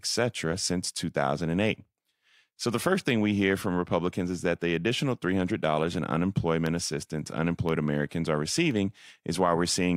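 Evenly spaced ticks enter the speech from 4.62 s to 8.71 s, about five in all, one every 1.02 s. These are periodic USB or driver dropouts. At each tick a background task stalls the USB bus or audio driver on a fixed schedule, and a tiny sliver of audio, far shorter than a millisecond, goes missing and is replaced by silence. That abrupt gap in the waveform is what produces each click.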